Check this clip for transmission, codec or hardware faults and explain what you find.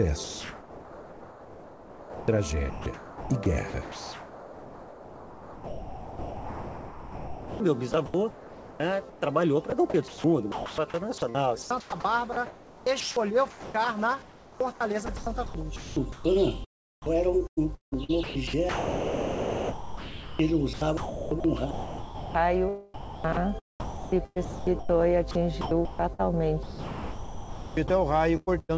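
One fault recurs through the clip: sound chopped by the voice detector, across four stretches. It rides on a call path whose content stops at 8 kHz, which fits a wideband codec such as G.722.

The sender's voice activity detection likely kept toggling transmission on and off. During each pause the receiver filled the gap with synthetic comfort noise. This happens from 0.24 to 16.24 s (about 9.7 s replaced), 17.02 to 24.70 s (about 3.3 s), 22.94 to 26.21 s (about 1.4 s) and 26.63 to 28.71 s (about 1.4 s). Soft onsets and tails drop out, so the sound turns choppy.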